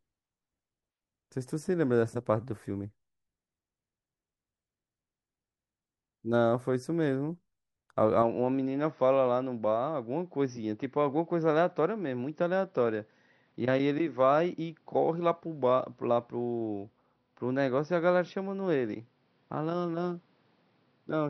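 Speech that abruptly turns duller and about 5 dB quieter at 8.23 s. The spectrogram goes blank above 5.9 kHz from there, likely an input switched to a poorer device.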